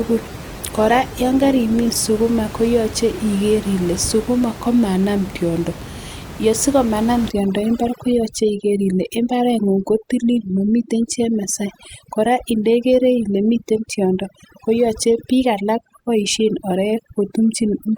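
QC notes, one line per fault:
0.00–2.00 s, adaptive stream starting at a low bitrate: the opening is dull and smeared, fitting a roughly 16 kbit/s Opus start, then the player switches to a better rendition at 2.00 s, which fits about 64 kbit/s. A spectrogram shows a low, blurry upper band that widens abruptly, with no gap in the waveform.
7.30–17.97 s, overdone noise removal: the room noise, about 14 dB below the speech, is pushed toward silence with twinkling specks left behind, and the voice's quieter components are cut along with the noise. A spectrogram shows isolated bright dots in a dark background and ragged, holed speech harmonics.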